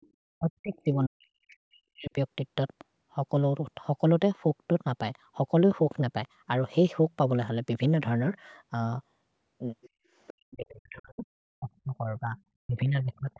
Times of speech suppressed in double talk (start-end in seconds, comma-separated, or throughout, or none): 0.38-2.15, 10.38-11.26, 11.56-12.37, 12.66-13.39